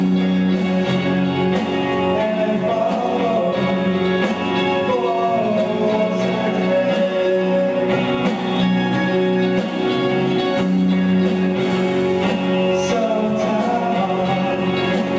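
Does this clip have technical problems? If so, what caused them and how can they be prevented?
Yes. Gain pumping runs through the whole clip. The level swings by around 5 dB. The likely cause is input gain set far too high, which makes a fast limiter clamp down repeatedly. Lowering the microphone gain until the limiter rarely engages prevents it.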